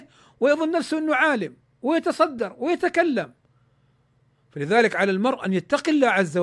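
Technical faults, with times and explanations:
No technical faults can be heard in this recording.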